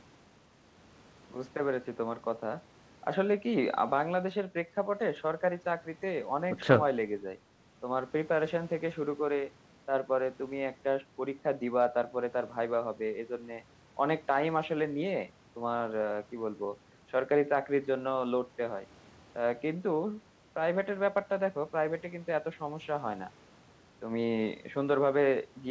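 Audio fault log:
No faults logged; the speech runs over a normal call path with nothing above 8 kHz, consistent with G.722 at 64 kbps.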